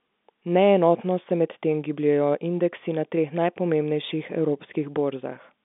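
No technical fault turns up in the speech, which sits in a telephone band of roughly 200 Hz to 3.6 kHz with nothing above about 3.7 kHz, just as a G.711 telephone coding path delivers it.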